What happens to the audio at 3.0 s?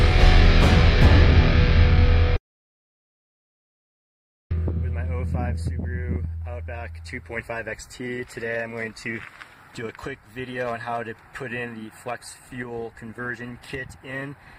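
At 3.0 s the sound is gone. From 2.36 s a brief fading buzz gives way to about 2.1 s of silence, and the audio returns at 4.51 s with that stretch missing. This is likely a long network dropout: no packets arrived, so the receiver briefly extended the last sound and then fell silent.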